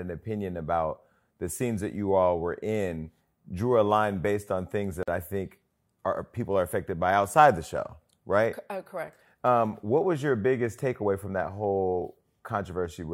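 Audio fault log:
5.03 to 5.08 s, gap at a join of encoded pieces: the speech drops out for about 46 ms and then picks up exactly where it left off, so nothing is lost, it just stalls. What you're hearing is two separately encoded chunks butted together without trimming, so the encoder's start-up delay and the padding on the last frame of the first chunk both stay in as silence. The edges are softened by the codec's smearing.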